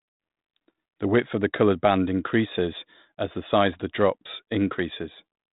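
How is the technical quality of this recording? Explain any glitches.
Nothing here counts as a glitch: the speech runs through a G.726 ADPCM path at 32 kbit/s, so it's capped below 4 kHz and carries only a light trace of that codec, and that's all there is to report.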